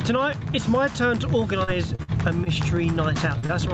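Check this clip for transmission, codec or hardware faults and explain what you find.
Three transmission faults appear from about 1.6 s onward, and the level pumps throughout.

The level swings by roughly 10 dB, leaving the audio squashed. This is gain pumping, likely caused by input gain set far too high with a fast limiter or compressor clamping it on every peak.

From 1.63 to 2.49 s the sound turns choppy, with pieces missing. This is repeated packet loss (robotic sound): four separate holes, the longest about 54 ms, each patched by extending the previous sound before the next loss arrives.

At 3.38 to 3.45 s there is a brief smear where roughly 40 ms of audio is gone. This is short concealed packet loss: the receiver covered the hole by continuing the last sound, then blended back into the real signal.

Straight after, at 3.46 to 3.52 s, a sound is held slightly too long. This is a short stall from a late packet: the jitter buffer ran dry, so the receiver stretched about 26 ms until the packet arrived, and nothing was lost.

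The top of the band stops at 8 kHz, which fits a wideband Opus call path.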